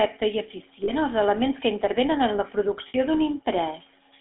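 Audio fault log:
throughout GSM full-rate codec. The speech carries the plainly audible buzzy, gravelly roughness of the original GSM coder. This coder models the vocal tract and feeds it a coarse train of regular pulses in place of the real excitation. That pulse train gives the grainy buzz. The line passes only about 250 Hz to 3.5 kHz, so the sound is thin and boxy. The low bitrate fits 13 kbps full rate.
0.84–0.93 s and 2.88–2.95 s lost GSM frames. At each point the speech briefly freezes into a rough, metallic ring instead of moving on. The decoder replaces each missing frame by repeating the last good frame's settings. That gives a held, ringing tone. The gaps last about 40 ms and 60 ms, which fits two and three lost frames. Both are too short to fade to silence.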